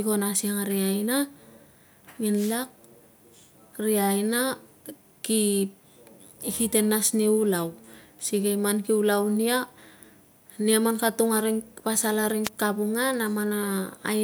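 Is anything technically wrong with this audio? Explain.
Yes, there are two wireless microphone noise hits, at 2.34 to 2.58 s and 12.44 to 12.49 s: the FM radio link fades, receiver noise surges, and a brief burst of static swishes over the speech.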